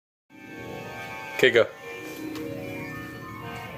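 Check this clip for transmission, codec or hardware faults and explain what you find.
There's one problem here, and it runs the whole way through: gain pumping. The level keeps breathing, with a swing of roughly 10 dB. That's most likely input gain set far too hot for the mic, with a fast limiter or compressor clamping down on every peak. The result is squashed, with loud and soft parts pulled unnaturally close together.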